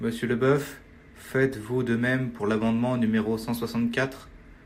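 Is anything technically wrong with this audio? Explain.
No, nothing technically wrong can be heard in this speech recording.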